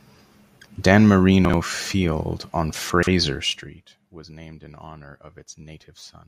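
Chunks out of order at 1.45 to 1.54 s and 2.90 to 3.07 s: blocks of about 43 ms play late, one block late first and three later, leaving a brief jumbled stutter framed by hard joins.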